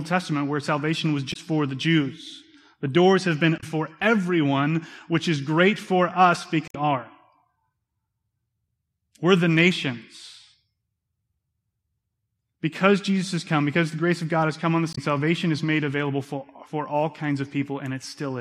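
Brief glitches of about 70 to 80 ms at 1.29, 3.57, 6.68 and 14.91 s reveal damaged data in the compressed stream, where the decoder lost sync on corrupted frames.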